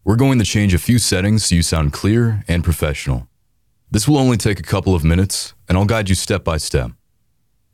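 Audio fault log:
1.76 s, 2.73 s, 5.46 s: bit error spike. A flipped bit briefly throws single samples (three in a row at 5.46 s) off by a power of two, reaching about -10 dBFS (about -16 dBFS at 5.46 s), heard as sharp, broadband ticks unrelated to the sound.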